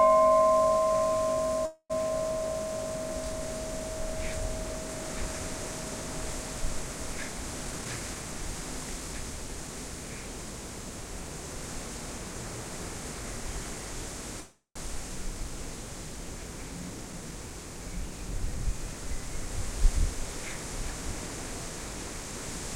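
Call audio freeze in this recording of everyday sounds at 1.65–1.92 s and again at 14.41–14.77 s: each time the sound stretches into a fading buzz or hiss, then drops to silence for about 60 ms and about 100 ms. This likely means delayed packets left the jitter buffer empty and the receiver extended the last sound. The audio resumes where it stopped, so 242 ms and 348 ms of gap were inserted with nothing missing. Jitter buffer speed-up at 7.65–9.69 s and 19.75–22.4 s: after a backlog built up, the receiver trimmed many short slices of one or a few pitch periods to reduce the delay. Pitch stays the same while playback speeds up. The first stretch runs at 111% speed, about a fifth of a second removed, and sounds hurried. The second runs at only 102%, about 50 ms removed.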